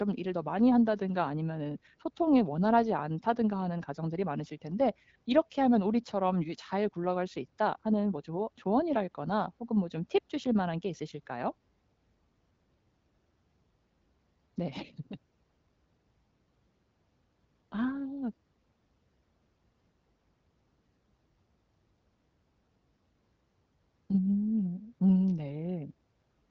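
Nothing stood out on listening to this speech recording.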